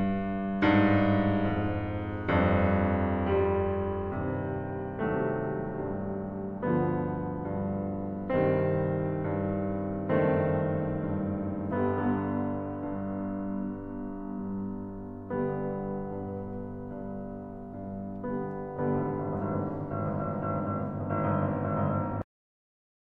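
At 22.22 s the music has a cut-off end: the final buffers never played, so sound halts mid-note into digital silence, a flat waveform and blank spectrogram through 23.13 s.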